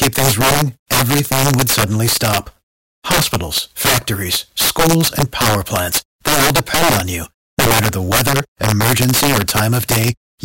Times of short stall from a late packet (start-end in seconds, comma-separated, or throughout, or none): none